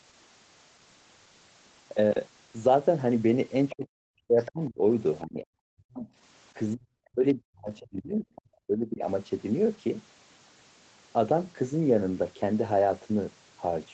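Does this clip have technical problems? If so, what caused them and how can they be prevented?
Yes. Brief scraps of the other side's voice leaking through appear at 3.69–3.75 s, 4.4–4.5 s (about 20 dB below the speech) and 8.36–8.41 s (about 30 dB below). They are likely residual loudspeaker echo the canceller missed. Unlike background chatter, these scraps are short. Preventing them takes a headset or better echo cancellation.

Speech is also suppressed in double talk at 3.73–4.82 s, 5.23–6.07 s and 6.75–9.05 s, dropping by up to about 40 dB in pieces. This is likely the canceller ducking everything while both sides spoke. Unlike packet dropouts, the gaps track the overlapping talk. A full-duplex-capable echo canceller or a headset avoids this.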